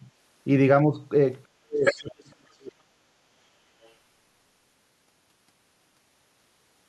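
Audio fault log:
0.00–3.19 s, speech suppressed in double talk: The speech dips by about 10 dB at 0.00–0.04 s and 0.86–1.00 s. From 1.44 to 3.19 s it drops by up to about 40 dB. Both sides likely talked at once, so the echo canceller turned everything down.
1.85–2.02 s and 3.83–3.92 s, other side's voice leaking through: A second voice breaks through in short scraps. The first scrap is about as loud as the main speech. The second is very faint, about 35 dB down. The echo canceller likely missed part of the loudspeaker sound.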